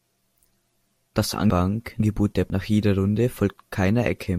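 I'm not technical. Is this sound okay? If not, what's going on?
No. Between 1.5 and 2.5 seconds, chunks out of order: two half-second pieces of speech play swapped, sounding jumbled. Unlike a dropout, nothing is missing.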